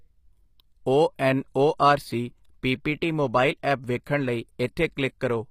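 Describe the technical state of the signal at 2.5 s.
At 2.5 s the speech carries the same damage heard across the whole clip. The treble sounds synthetic, with gritty, lispy s sounds and nothing above 15.5 kHz. The likely cause is HE-AAC compression at a low bitrate, near 24 kbps. Its band replication rebuilds the top octaves from copied lower bands, so the harmonics there are out of line.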